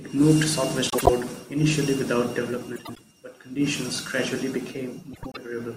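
Frames out of order occur three times in the speech: 0.90 to 1.10 s, 2.76 to 2.99 s, and 5.13 to 5.37 s. In each, two adjacent blocks of frames were decoded in swapped order, so the stretch plays back-to-front by halves, about 72 ms blocks in the first and 96 ms in the others, consistent with runs of three and four frames. Each sounds like a brief garbled flutter, and no time is lost.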